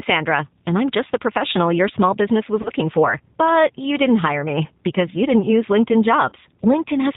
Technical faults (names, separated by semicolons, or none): G.729 codec; VoIP packet loss concealed by the speech codec